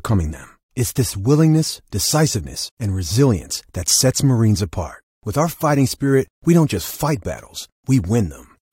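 No technical faults are audible.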